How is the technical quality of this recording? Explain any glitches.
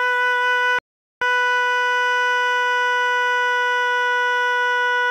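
The music has one clear glitch, a playback stall. At 0.79 s the player likely ran short of buffered data or had its output thread blocked, so nothing was sent to the output until 1.22 s. The music cuts off mid-flow into 0.43 s of silence, then picks up again.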